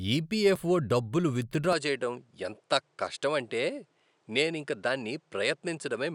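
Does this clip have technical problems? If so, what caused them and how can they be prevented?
Yes. At 1.73 s, just after "ఈపిఎఫ్ఓ డబ్బులు విత్డ్రా", the recording likely changed to a poorer input device. From there to the end, nothing above 10.5 kHz survives, so the speech turns duller, with a faint new noise floor far below it and no gap or level jump. Locking the input device for the whole session prevents this.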